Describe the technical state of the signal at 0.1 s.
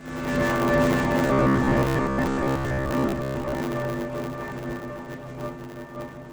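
At 0.1 s the signal is already affected by a block size mismatch (truncated), which runs through the whole clip. One stage hands over longer blocks than the next stage takes in, which fits 512-sample blocks, and the tail of each block is discarded. The result is a steady 100 Hz buzz at the block rate, with the sound running about 1.16 times fast. Unlike a resampling speed error, the pitch stays close to normal.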